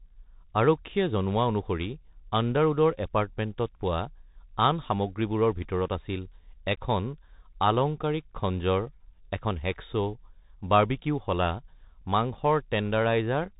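From start to finish the speech carries the sound of a Bluetooth CVSD headset codec. Everything above about 3.8 kHz is gone. A one-bit delta coder is tracking the waveform and can't keep up with loud, fast changes. S sounds turn scratchy, and a grainy hiss sits underneath.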